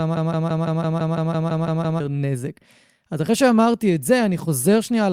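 A broken-record loop is already under way at the start and runs to 2.0 s. A 168 ms fragment repeats eleven times, likely from a stalled stream. From 3.48 s to the end, a call bitrate drop makes the speech coarse and muffled. It sounds consistent with a fall from about 64 to 28 kbps.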